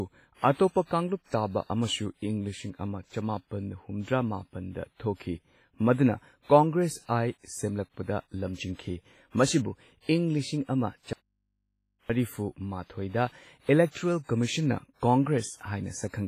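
Throughout the speech there is heavy codec damage, likely WMA compression: the transform blocks smear quantisation noise over tens of milliseconds, giving a ringing, washy texture and hiss that rises and falls with the signal. Nothing remains above 15.4 kHz, which fits a bitrate near 24 kbps.

From 11.13 s to 12.10 s the speech abruptly vanishes for about 0.97 s. This is an audio dropout to a faint residue: the signal was likely lost upstream while the path stayed live, so the gap holds only mains hum, roughly 50 dB below the speech.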